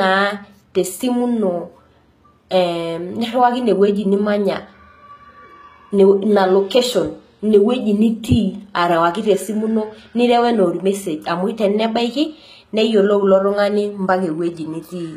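Throughout the speech the treble has likely been rebuilt rather than kept, as HE-AAC compression at a low bitrate, around 20 kbps, would do: the upper spectrum is copied up from lower bands. Sibilants sound gritty and lispy, and nothing remains above 14.9 kHz.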